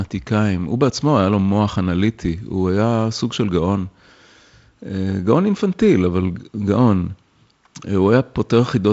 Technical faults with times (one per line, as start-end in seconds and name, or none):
none